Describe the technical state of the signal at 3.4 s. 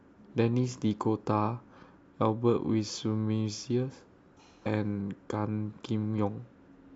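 At 3.4 s the speech signal is intact, with no fault present at that moment.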